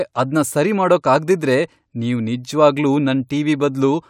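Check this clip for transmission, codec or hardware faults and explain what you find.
No faults to report.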